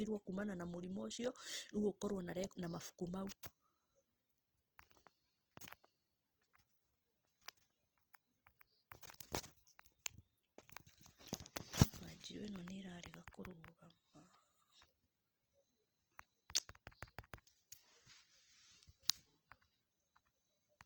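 Speech running the full clip, with plainly audible Opus compression damage throughout: the sound turns rough, grainy and noisy rather than swirling or watery like MP3, and content still reaches about 20.2 kHz. It is likely Opus music-mode coding at a low rate, consistent with roughly 16 kbps.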